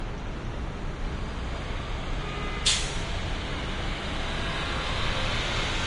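From start to end the audio carries plainly audible Vorbis compression damage, likely from encoding at a low bitrate, with the artefacts pointing to about 32 kbps. Nothing is present above 10.5 kHz, so the top octave is simply missing. The treble beneath that cut-off has been quantised so coarsely that fine detail turns into noise of similar energy, giving a hissy, grainy texture, roughened tonal parts and softened, smeared attacks throughout.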